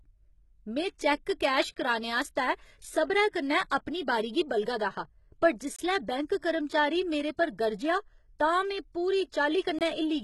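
Right from the start the speech has that gritty, metallic top end, with s sounds going lispy and nothing above about 11.8 kHz. That's likely heavy HE-AAC compression, with the treble rebuilt from copied lower bands rather than coded, which fits a bitrate around 16 kbps.

Then there are holes of about 23 ms at 1.74, 5.76 and 9.79 s, about 4 s apart. That's a gap between chunks: the audio arrived in 4-second pieces, and each join picked up a sliver of silence without losing any sound.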